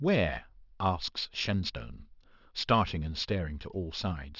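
A speech recording with aliasing running through its whole length. Sibilants and other bright consonants come out gritty and metallic, and the spectrum runs hard up to a ceiling at 6 kHz. The content above that point has folded back down into the band at wrong, unrelated frequencies, sitting roughly 15 dB below the speech. That points to the sample rate being halved, from something like 24 kHz to 12 kHz, without an anti-aliasing low-pass filter first.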